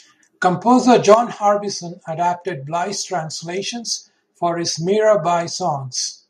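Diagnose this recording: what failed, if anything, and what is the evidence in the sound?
Between 1.09 and 1.14 s the loudest syllable turns harsh and crackly, its peaks flattened, driven about 4 dB past full scale with a noticeable share of samples pinned. This is likely microphone overload at the converter input, distinguished from codec distortion because the damage tracks peak level, not spectral content.

At 1.14 s, right after that clipped peak, speech and background noise drop together by about 7 dB in a single step, and again at 5.49 s by about 2 dB. This is microphone volume stepped down by call processing, likely automatic gain control. It differs from fading because the level changes instantly, and unlike a noise gate it lowers the noise floor along with the speech.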